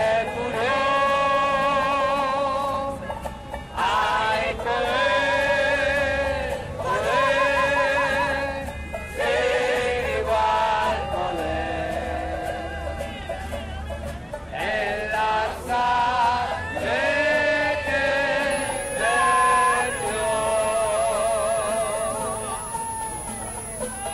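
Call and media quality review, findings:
Switching supply whistle, 18.50 s to end of clip. High whistle near 10 kHz, drifting between 10.2 and 10.4 kHz, roughly 10 dB under the programme. Probable component: switch-mode PSU in audible burst mode or beating with another converter; pitch tracks load.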